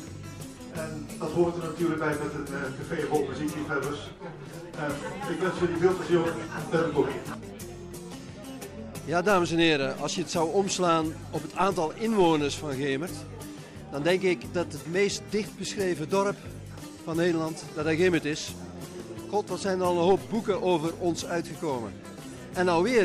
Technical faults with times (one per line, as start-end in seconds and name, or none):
none